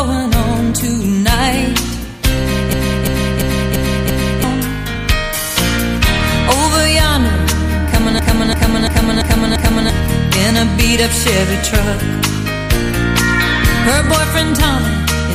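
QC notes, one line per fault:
2.73–4.44 s and 8.19–9.90 s, system hang loop: one 341 ms slice repeats five times at 2.9 Hz, like a skipping record, which fits a frozen system replaying a 16384-sample buffer. About 1.5 s of audio is lost each time.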